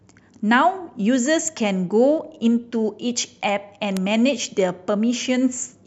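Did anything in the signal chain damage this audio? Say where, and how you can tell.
Yes: sharp broadband ticks at 1.48 s (about -18 dBFS) and 3.97 s (about -6 dBFS) are bit error spikes, where flipped bits in storage or a digital link make brief power-of-two jumps.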